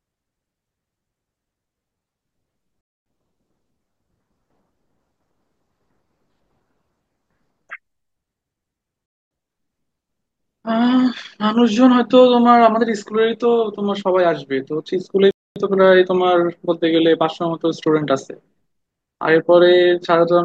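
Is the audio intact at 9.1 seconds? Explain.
No, 9.1 seconds falls inside a gap between chunks running from about 9.06 to 9.31 s. The speech stops dead for a quarter of a second (250 ms) and then picks up again. Nothing seems to be missing. The audio looks like it was handled in pieces of about 6 s, and silence was slipped in at the join, so the flow just gets interrupted there.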